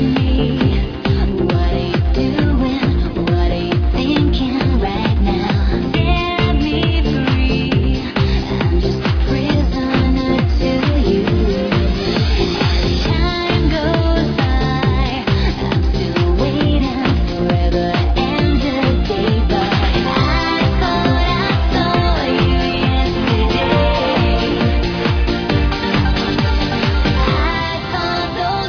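No faults are audible anywhere in the recording.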